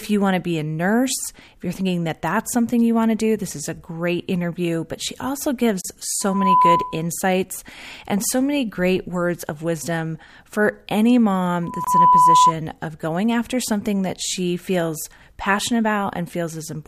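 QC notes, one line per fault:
5.81 s and 11.84 s, gap at a join of encoded pieces: silences of 33.7 ms and 24.0 ms, six seconds apart, the first right after "she also". Pieces were encoded separately and joined untrimmed, leaving encoder start delay and last-frame padding. Waveform shows a flat slice with slightly smeared edges. Spectrogram shows a thin blank vertical band across all frequencies.
6.20–7.06 s and 11.62–12.53 s, loudspeaker feedback squeal: a 1 kHz tone swells over roughly a third of a second to about 10 dB above the speech. The second sits between "of wisdom for any" and "of going after something". The microphone picks up its own loudspeaker and loop gain exceeds one at 1 kHz. Spectrogram shows a bright horizontal line at 1 kHz, and the waveform envelope balloons into a dense sinusoid.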